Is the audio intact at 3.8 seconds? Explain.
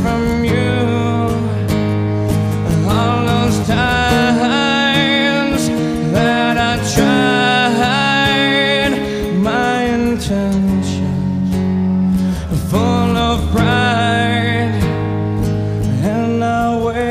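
Yes, the audio at 3.8 seconds is intact, with no dropout, click, distortion or other fault at that point.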